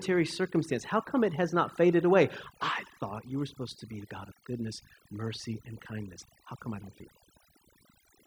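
From start to finish, the speech carries overdone noise removal. A noise reduction process was pushed too hard on a noisy recording. It cuts individual frequency bands down or out whenever they sit close to its noise estimate. Quiet detail in the voice gets removed along with the noise. The background drops away, broken by small twinkling specks.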